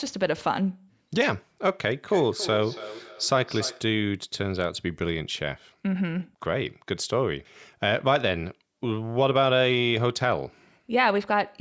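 From 2.04 s to 4.0 s the speech is followed by feedback echo between two devices: a second device in the same room plays the call audio aloud, and this microphone picks it up again, outside the reach of its own echo canceller. The sound returns at a steady interval of roughly 0.3 s, peaking about 14 dB below the direct speech, with each pass thinner and more ringing. The call microphone processing limits the band to nothing above 8 kHz.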